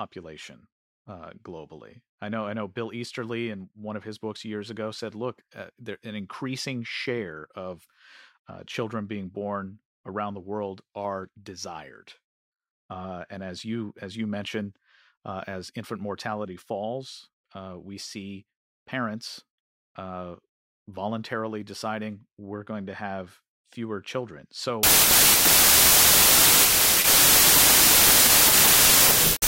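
Speech audio whose final stretch suffers a wrong sample width: from 24.83 s, right after "to have fewer children", to the end at 29.48 s, the data appear to have been written as packed 24-bit samples but read back as 32-bit ones. Each value is assembled from misaligned bytes, so only some keep the true signal's top bits. The result is loud noise with the speech buried inside, running about 1.33 times too fast, with pitch raised to match.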